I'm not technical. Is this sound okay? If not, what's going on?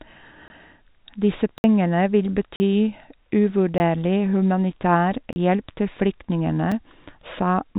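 No. There are blocks of digital silence at 0.48, 1.58, 2.56, 3.78 (just before "humanitær hjelp til flyktningene"), 5.33 (just before "hjelp til flyktningene") and 6.72 (right after "humanitær hjelp til flyktningene"). The computer likely failed to deliver sound in time, so tiny gaps of 5 to 60 milliseconds snap in, each heard as a click or brief dropout. The narrow, phone-like sound, with nothing above 4 kHz, comes from the call connection.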